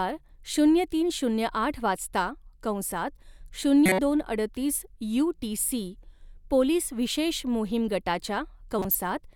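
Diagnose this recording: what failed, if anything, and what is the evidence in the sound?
Codec failure, corrupt frame decoded: damaged compressed frames were played as if valid, so misread gains and codes put energy at wrong frequencies. Chirp-like noise bursts, peaking around -10 dBFS, break into the speech at 3.86–3.99 s and 8.79–8.97 s, each spanning a handful of frames.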